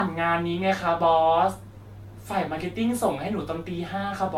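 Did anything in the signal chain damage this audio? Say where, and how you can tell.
Yes: the speech sounds swirly, smeared and hollow throughout, with blurred attacks and nothing above 17 kHz, likely generation loss from repeated lossy codec re-encoding, about five passes.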